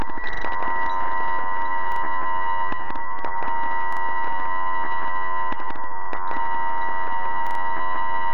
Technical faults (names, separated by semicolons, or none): repeated buffer